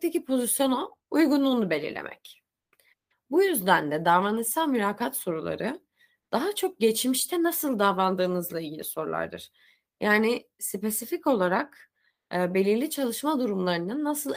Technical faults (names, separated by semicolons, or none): none